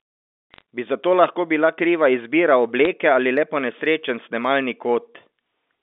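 Sharp ticks and short bursts of crackle sit over the speech at 0.54–0.62 s, at 2.85 s between "lahko bila kriva izbira" and "ali le ponesrečen", and at 4.62–4.74 s after "ali le ponesrečen". These are bit errors on a digital phone line. A fraction of a percent of bits on the G.711 telephone link flipped, each one throwing a single sample off.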